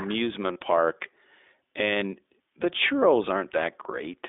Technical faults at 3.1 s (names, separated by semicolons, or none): iLBC codec